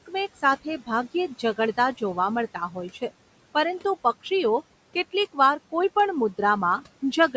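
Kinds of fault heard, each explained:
Speech cut by the noise suppressor: The noise suppressor mistook part of the speech for background and turned it down along with the room noise. It happens once, between 2.54 and 2.77 s. Within that stretch, about a tenth of a second of speech sinks by up to about 8 dB. That part sounds swallowed and faint. The room noise sits about 20 dB below the speech.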